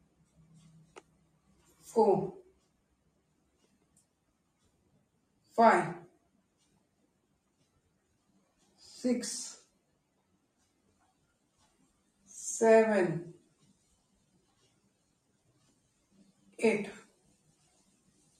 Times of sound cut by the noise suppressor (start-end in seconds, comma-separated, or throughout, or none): 0.01-1.90, 2.42-5.57, 6.07-8.81, 9.61-12.30, 13.37-16.57, 17.03-18.39